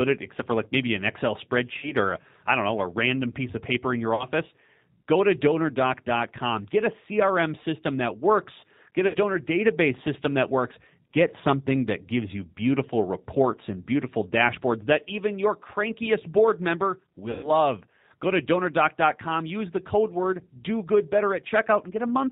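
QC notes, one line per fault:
throughout, G.729 codec: speech sounds slightly rough and synthetic with nothing above 4 kHz, because the 8 kbit/s codec rebuilds it from a vocal tract filter, pitch predictor and sparse pulses.
1.78–1.92 s, 4.15–4.25 s, 9.08–9.16 s and 17.31–17.50 s, VoIP packet loss concealed by the speech codec: brief fading smears where the decoder stretched its last sound over 40, 40, 60 and 120 ms gaps.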